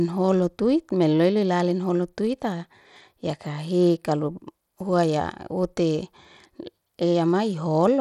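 From the first moment to the end, the speech has a rough, thinned-out top end, and the damage is plainly audible. The treble keeps dropping out and flickering back, with a gritty grain and aliasing sitting on the sound. That's likely Bluetooth SBC compression starved of bits. At a setting that sounds like roughly 96 kbps, the upper sub-bands get little or nothing and the rest are quantised coarsely.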